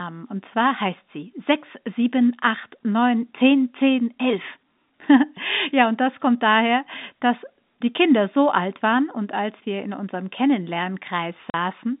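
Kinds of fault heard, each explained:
Packet loss filled with silence: near the end, from 11.5 to 11.54 s, the speech drops to dead silence for 40 ms, which fits the loss of four 10 ms packets, with an abrupt cut in and out. Unlike concealed loss, nothing fills the hole: there is no repeated or smeared fragment of the preceding sound, only a clean void inside the narrow telephone-band G.711 audio.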